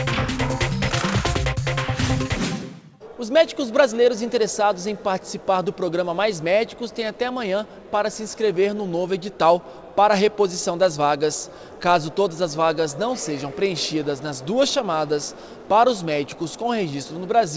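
Right through the clip there's clock drift between sender and receiver: the far end's clock runs fast, something like 4 percent ahead of the playback side. So audio arrives a little quicker than it can be played out, the jitter buffer keeps creeping fuller, and the receiver has to throw bits away to keep the delay from building up. You don't hear the drift itself so much as the housekeeping it forces.

That housekeeping shows up as repeated timing corrections from about 1.34 s to 17.31 s, with the receiver effectively pushing material through at around 104 percent of normal pace. Each correction trims a short piece out, always in the same direction but at uneven spacing, so any audible trace is small hiccups or an unsteady tempo rather than any obvious dropout. All this rides on top of a call codec band-limited to 8 kHz, which points to G.722 at something like 64 kbps.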